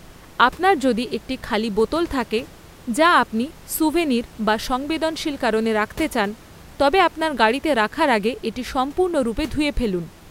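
No technical faults can be heard in this recording.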